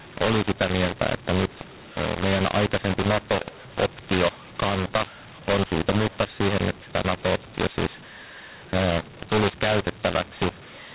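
From start to finish this speech has a mu-law and A-law mix-up: it was coded as G.711 A-law, which caps everything at 4 kHz, but decoded as mu-law. Levels land wrong, so the voice turns harsh and gritty, and pauses fill with hiss.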